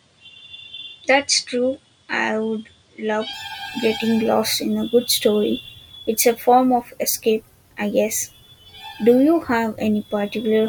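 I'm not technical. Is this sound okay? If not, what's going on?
No. Until about 3.33 seconds the speech sounds duller and a bit quieter, then clears up. That's likely the input switched to a poorer device.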